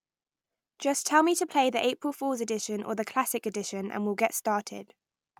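Nothing stood out on listening to the speech in the clip.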